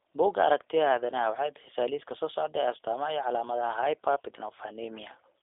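Speech, carried through a G.729 codec for the whole clip. The sound is band-limited to a telephone line, roughly 300 Hz to 3.6 kHz. Nothing is heard above about 3.7 kHz. The codec rebuilds each 10 ms frame from a vocal tract filter, a pitch estimate and a few pulses. That model gives the speech a rough, slightly synthetic edge, and the damage is plainly audible. The thin, buzzy texture fits the 8 kbit/s G.729A variant.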